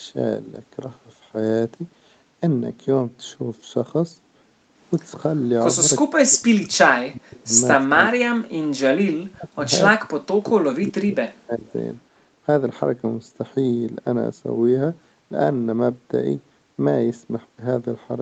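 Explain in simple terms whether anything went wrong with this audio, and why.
The echo canceller likely got confused when both sides talked at once, causing speech suppressed in double talk. It turned the talker down along with the echo, so the speech sharply drops away or cuts out in pieces at 6.12–7.54, 7.96–8.58, 9.27–9.65, 9.97–10.56, 10.79–11.17 and 11.41–11.75 seconds.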